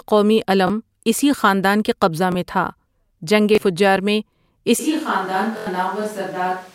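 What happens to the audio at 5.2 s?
By 5.2 s you're hearing the switch to a distant microphone, which kicks in abruptly at 4.79 s and runs to the end. The close mic likely dropped out, so the speech turns roomy and thin, sits about 5 dB quieter, and carries more room noise underneath, roughly 25 dB below the speech.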